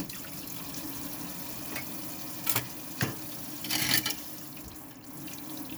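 Everyday sounds, with no technical faults audible anywhere.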